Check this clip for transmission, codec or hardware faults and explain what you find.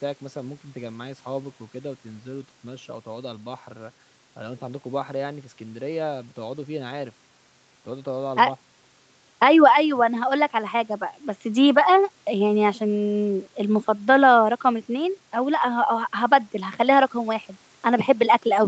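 Nothing faulty can be heard.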